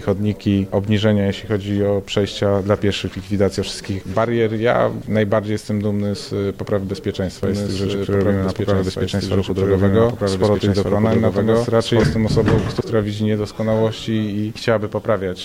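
At 7.43 s a doubled audio track begins. A second copy of the same sound joins the original, trailing it by about one and a half seconds. The copy is roughly as loud as the first and covers the full band. It has no decay or room colour. It likely comes from a second, slower capture path or an edit holding two copies out of step. The doubling ends abruptly at 12.03 s.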